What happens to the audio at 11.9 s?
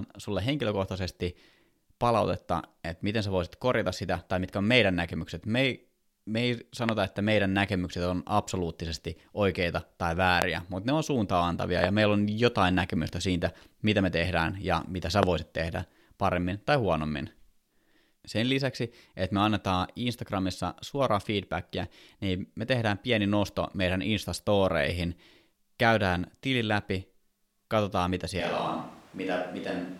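A sudden voltage step, likely from a plug, switch, static discharge or driver glitch, enters the signal path between 11.84 and 11.86 s, and the circuitry downstream shapes it into a brief pulse. The result is a single loud pop, peaking at roughly 20 dB above the speech, a sharp click-thump lasting only a couple of hundredths of a second. The speech continues underneath it without interruption.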